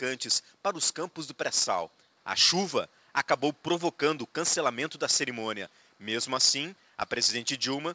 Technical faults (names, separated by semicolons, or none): none